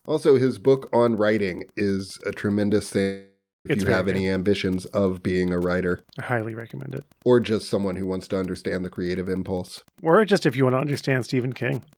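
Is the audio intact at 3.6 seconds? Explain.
No. A long network dropout runs from 3.01 to 3.67 s, so 3.6 s falls inside it. About 640 ms of audio most likely never arrived over the network, and the receiver papered over the gap for roughly 0.64 s by extending the last speech sound into a fading buzz or hiss. That decays into silence for about the final 0.26 s, and the speech then resumes with the lost portion simply gone.

Also present at that moment, as throughout the clip, is Wi-Fi interference. A nearby radio's beacon, repeating every 102.4 ms, is being rectified by the audio circuitry. It sits around 35 dB below the speech as a faint, steady ticking about ten times a second.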